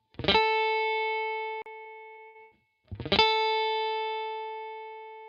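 CD skip at 1.62 to 1.66 s: the laser jumped to another turn of the disc's spiral, leaving a brief mute of around 40 ms before playback resumes elsewhere.

Repeated packet loss (robotic sound) from 1.81 to 2.53 s: four gaps, the longest 90 ms, are patched by stretching the last sound, giving about 240 ms of choppy, robotic fill and 260 ms missing.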